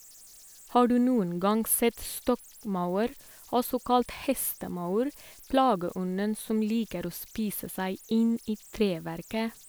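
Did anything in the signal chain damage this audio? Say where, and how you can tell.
Yes, at the converter. Right through the clip there's a faint whistle around 7 kHz, about 28 dB below the speech, clearest in the pauses and grainy under quiet passages. That's converter idle tones: an undithered delta-sigma modulator settling into repeating bit patterns on low-level input.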